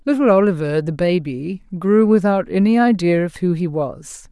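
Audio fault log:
Nothing stood out on listening to this speech clip.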